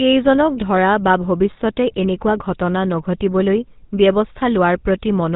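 Throughout the clip, the speech has passed through the GSM full-rate codec, consistent with a 13 kbps stream. It rebuilds the voice from a vocal-tract model fed by sparse, evenly spaced pulses and discards everything above 4 kHz, leaving plainly audible buzzy, gravelly roughness and a muffled top end.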